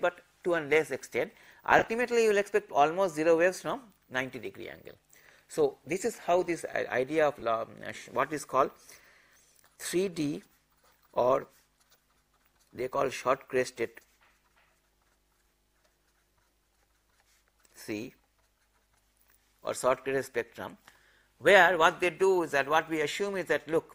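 The audio has three brief dropouts from lost LE Audio frames. Near 1.79 to 1.87 s, about 50 ms of sound goes missing across 80 ms, in runs of roughly 20 ms at most. At 7.40 to 7.42 s, 20 ms drop out. At 12.77 s, a 10 ms gap. The decoder fills each gap by repeating the last spectrum with scrambled phase, so the sound turns into a short noisy smear. The gap sizes fit 10 ms LC3 frames. Light lossy compression is also present.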